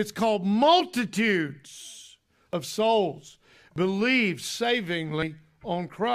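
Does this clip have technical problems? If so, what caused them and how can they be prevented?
Yes. At 0.79 to 0.81 s and again at 3.28 to 3.30 s a brief glitch breaks through the speech. This is damaged data in a compressed stream: corrupted frames make the decoder lose sync until it finds the next valid header. Verified transfers with error checking would prevent it.

At 1.74, 2.53, 3.76 and 5.22 s the speech jumps ahead. About 50 ms is missing at the first and last points and about 20 ms at the other two. The likely cause is a dropped buffer (overrun), where unread samples were overwritten. Larger buffers or higher-priority audio capture would prevent it.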